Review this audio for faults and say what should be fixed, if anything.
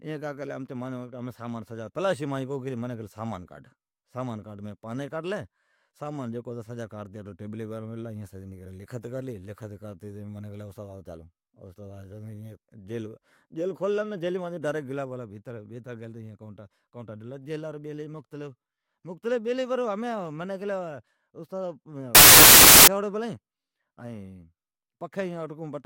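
Wrong sample width, 22.15 to 22.87 s: packed 24-bit samples are being read as 32-bit, so each value straddles mismatched bytes. Loud noise swamps the buried speech, which runs about 1.33 times fast and high in pitch. Carry the sample format with the data and check it on every read.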